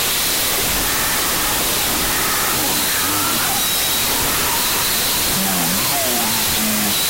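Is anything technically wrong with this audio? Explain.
Yes. Throughout the clip there is a wrong sample width fault. The sound points to 32-bit float data being read as 16-bit integers. Each four-byte float is split into two integer values, and many of these are built from mantissa bytes rather than the signal's top bits. The result is loud, harsh noise with the original sound buried inside it. Because each sample becomes two, playback runs at half speed, about an octave low.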